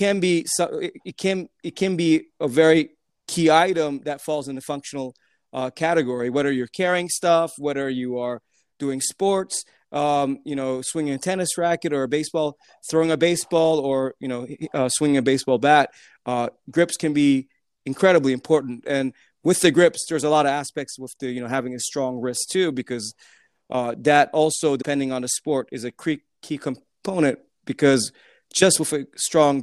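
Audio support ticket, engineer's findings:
Damaged data in compressed stream, 24.78–24.83 s, after "because uh that also", before "on the sport is". Brief disruption. Decoder lost sync, resumed at next frame header.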